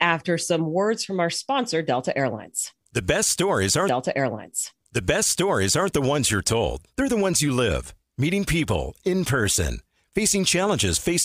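A stream segment repeated from 3.88 s to 5.88 s. Just after "best stories", the player jumps back and plays the same stretch of speech a second time, adding about 2.0 s before the talk resumes with "the ones you're told". The same chunk of the stream was fetched or queued twice and handed to the decoder both times. A small blip marks the jump back, where the end of one copy butts against the start of the other.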